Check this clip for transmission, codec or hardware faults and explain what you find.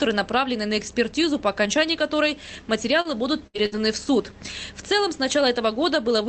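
Three kinds of network fault cluster between about 3.0 and 3.8 s, heard through a call path whose coding noise and 8 kHz top limit fit Opus at roughly 24 kbps.

Short stall from a late packet, 3.01 to 3.08 s: a packet arrived late and the jitter buffer ran dry, so the receiver held the last sound for about 34 ms. The result is a brief smeared sustain, nothing skipped, and playback then runs 34 ms later.

Lost packet rebuilt from error correction, at 3.05 to 3.11 s, 3.54 to 3.60 s and 3.72 to 3.78 s: each lost packet was replaced by the low-bitrate backup copy carried in the following packet. Each 60 ms patch plays without a gap but sounds rougher and noisier.

Burst of packet loss, 3.47 to 3.57 s and 3.66 to 3.75 s: consecutive packets never arrived in time. The receiver extended and faded the last sound for 68 ms and then 60 ms, heard as a held buzz or hiss, and each time 60 ms of audio is missing when playback resumes.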